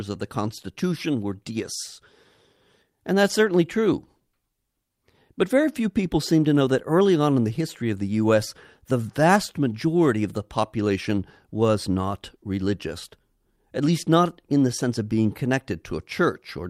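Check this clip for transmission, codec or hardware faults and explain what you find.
There are two related transmission faults: a clock mismatch between the two ends, and the receiver's continual corrections for it.

Clock drift between sender and receiver runs through the whole recording. The sender's audio clock is running fast, by roughly 4 percent. Samples arrive faster than the receiver plays them out, so its jitter buffer keeps filling. The timing never settles, and the speech carries a faint, uneven instability from start to finish rather than one isolated glitch.

Repeated timing corrections follow from this, from 0.19 s to 16.59 s, with playback effectively pushed to 104 percent speed. To keep the overfilling buffer in check, the receiver repeatedly drops short pieces of audio. All the corrections go the same way, removing material, but they are spaced irregularly. Each cut is small, so they come across as slight hiccups and a tempo that hurries unevenly rather than as obvious dropouts.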